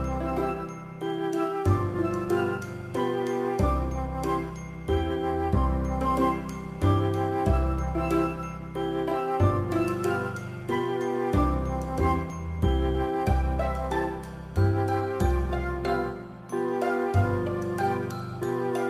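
No faults can be heard anywhere in the clip.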